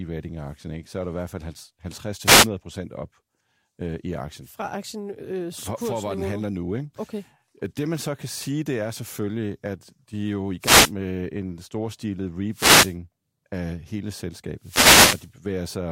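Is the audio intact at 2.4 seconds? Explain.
No. At 2.4 seconds the speech is inside a wireless microphone noise hit running from 2.23 to 2.48 s, about a quarter of a second. The analogue FM radio link faded as reflected signals cancelled at the receiver, letting receiver noise rise over the voice, heard as a brief swish or burst of static. A spectrogram would show a short broadband noise patch smearing across the speech harmonics, and the waveform a fuzzy noise layer over the speech envelope.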